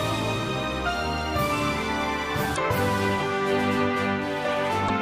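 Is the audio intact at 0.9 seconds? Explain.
Yes, at 0.9 seconds the audio is intact, with no fault audible at that moment.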